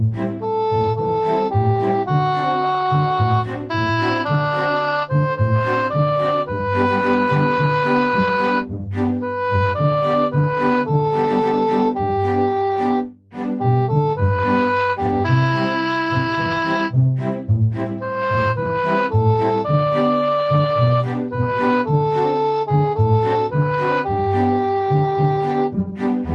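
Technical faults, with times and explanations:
No technical faults are present, so there are no times or explanations to list.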